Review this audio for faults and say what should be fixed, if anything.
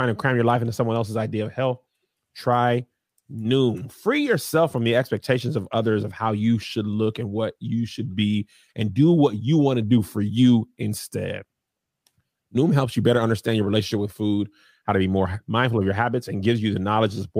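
No faults turn up in this audio, so there is nothing that should be fixed.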